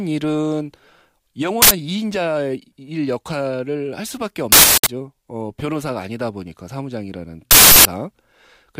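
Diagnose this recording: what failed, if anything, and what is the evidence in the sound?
Three uninitialised buffer events interrupt the speech, a driver or buffer-stage failure. Each is a sudden, loud burst of digital noise: 1.62 to 1.71 s (about 85 ms), 4.52 to 4.86 s and 7.51 to 7.85 s (about 341 ms each). The lengths fit whole blocks of 4096 and 16384 samples. Playback read those blocks before audio was written into them, so leftover memory contents were output as samples.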